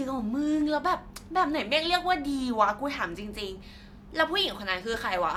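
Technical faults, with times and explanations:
Nothing technical stands out in this bit of speech; there's no fault to flag here.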